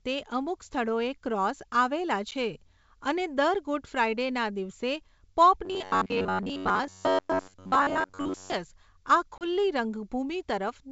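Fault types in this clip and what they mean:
Packet loss on an ADPCM call: lost packets leave hard-edged silent gaps, one short and one about 30 ms long, and the decoder's adaptive predictor and step size drift from the sender's, so the speech resumes slightly distorted before settling.
Robotic sound from repeated short buffers: new audio is likely arriving too seldom, so most of the time is filled by looping the last few milliseconds while real audio is skipped, imposing a fixed pitch of about 94 Hz that turns this stretch into a rigid metallic buzz.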